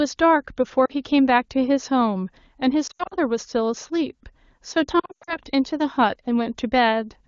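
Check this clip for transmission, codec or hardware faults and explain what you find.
Lost AMR speech frames occur three times. At 0.85 s, about 40 ms goes missing, heard as a drop to near silence. From 2.87 to 3.14 s, losses scatter over 240 ms, the longest run 80 ms. From 4.99 to 5.37 s, they scatter over 280 ms, the longest run 100 ms. Corrupted frames failed their checks. The decoder reused old pitch and tract settings at falling gain. The sound drops to near silence within two frames, then returns weak or rough. The wideband codec itself sounds clean, as expected from a high AMR-WB rate.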